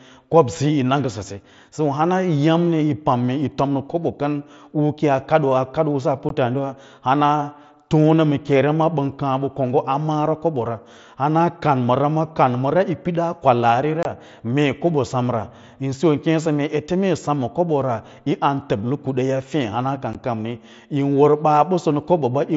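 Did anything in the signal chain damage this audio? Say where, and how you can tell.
Yes. Unconcealed Bluetooth headset packet loss on the wireless link punches abrupt gaps at 6.29 s after "usu a", 14.03 to 14.05 s after "pidaa kwalaari", and 20.13 s. Lost mSBC frames were replaced by silence or an idle pattern.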